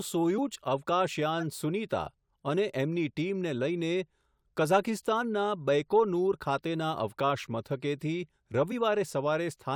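At 0.37 s, compressed frames were skipped: a short run of frames, roughly 20 ms of audio, never reached the output, so the speech jumps forward.

From 1.38 to 1.43 s, a corrupt frame was decoded. About two damaged frames were played as if valid, and misread gains and codes put energy at wrong frequencies. The result is a short error peaking at around -30 dBFS.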